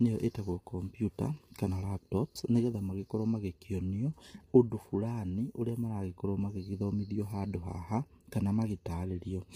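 Throughout, the speech sounds heavily rough and grainy. Noise fills between harmonics. This is likely low-delay AAC compression, its short frames starved at about 24 kbps.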